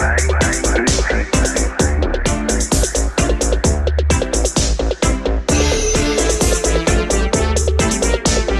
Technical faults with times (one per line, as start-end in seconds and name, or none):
7.63-7.70 short concealed packet loss